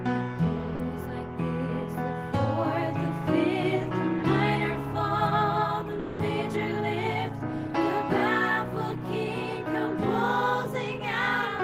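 Sound dropped by the voice detector at 0.75 to 0.79 s (40 ms) and 5.99 to 6.19 s (200 ms): the audio gives way briefly to steady noise or near silence. The cause is likely a sender's voice detector treating the sound as background and pausing transmission, which fits Opus discontinuous transmission.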